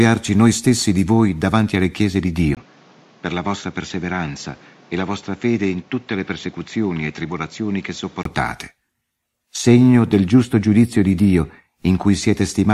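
At 2.55 s, just after "davanti alle chiese di", a 20 ms gap leads into duller, boxier speech with nothing above 7.6 kHz, a level a few decibels lower and a faint new noise floor until 8.25 s. The likely cause is input switched to a poorer device.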